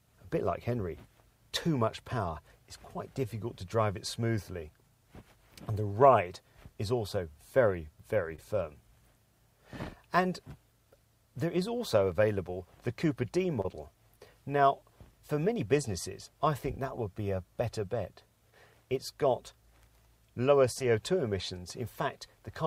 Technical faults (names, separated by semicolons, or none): short concealed packet loss